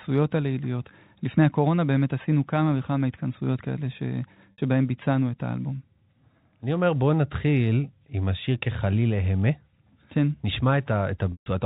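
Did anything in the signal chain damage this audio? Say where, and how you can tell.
Yes: packet loss on the network, concealed by pitch repetition, left a buzzy 60 ms hold at 4.52 s and a 140 ms fade-out at 11.32 s.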